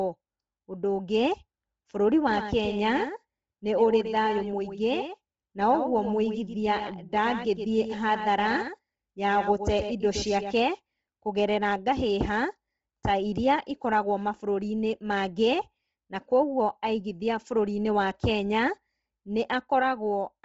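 Throughout the speech, likely Bluetooth LC3 compression at a low bitrate strips the upper band and fills gaps with noise, leaving grainy, breathy speech with nothing above 7.8 kHz. From 2.31 to 10.55 s, a doubled audio track, likely a second copy arriving via a slower path, trails about a tenth of a second behind, roughly 10 dB quieter, and starts and stops abruptly.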